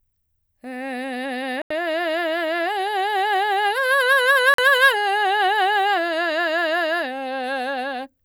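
The music cuts to silence at 1.62–1.71 s and 4.54–4.59 s, then resumes further on. This is likely a Bluetooth dropout, with packets arriving too late to play.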